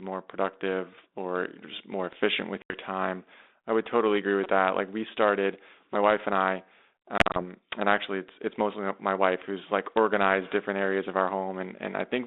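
Right after "just more efficient with", from 2.62 to 2.74 s, there's packet loss on an ADPCM call, in what sounds like 32 kbit/s G.726 on a 250 to 3700 Hz line. About 80 ms drops to hard-edged silence, and "time I would totally" comes back with some distortion while the decoder's predictor and step size catch up.

After "I would totally agree", at 4.44 to 4.46 s, a repeated buffer plays a 5.33 ms chunk four extra times, which fits a 256-sample buffer. New audio arrived late, so you get a quick buzzy stutter.

Then after "wife and I", from 7.18 to 7.45 s, more ADPCM packet loss hits. About 100 ms goes missing in gaps scattered over 160 ms, the longest run 40 ms. The choppy holes leave "and actually it's" a bit rough.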